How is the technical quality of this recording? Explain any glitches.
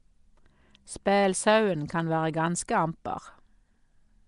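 The technical quality is poor. Throughout the speech, the sound is rough and hissy with a smeared, underwater character, and nothing reaches above 10.6 kHz. This is likely Nellymoser compression. Weak bands received no bits and were refilled with noise.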